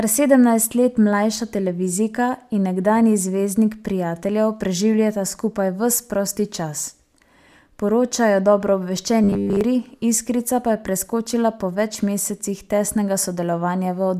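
Speech, with a fault from 9.24 to 9.61 s where audio likely stopped arriving often enough and the playback filled the gaps by looping the last 10 ms of signal, so roughly seven tenths of that stretch is repeated material rather than real audio. The result is robotic sound from repeated short buffers: the loop rate forces a fixed 100 Hz buzz onto the voice, which turns rigid and metallic while loosely tracking the speech.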